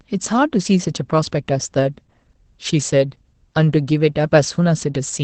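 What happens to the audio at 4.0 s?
Opus voice compression is present at 4.0 s, as throughout the clip. The linear-prediction SILK coder rebuilds the speech from a coarse excitation, which fits about 12 kbps, and drops everything above 8.6 kHz, leaving it muffled, hoarse and faintly robotic.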